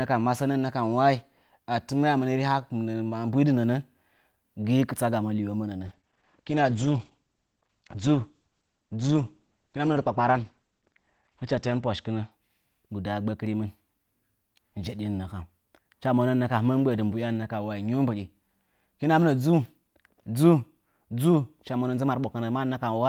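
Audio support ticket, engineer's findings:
Call bitrate drop, 5.86–12.37 s. Speech turns rough and muffled, consistent with the encoder falling from about 32 kbps to about 11 kbps and holding the low rate for roughly 6 s. Spectrogram: energy above 8 kHz vanishes, full 20 kHz band returns at 12.37 s. Probable component: bandwidth estimator throttling Opus, which codes coarsely and narrows the band.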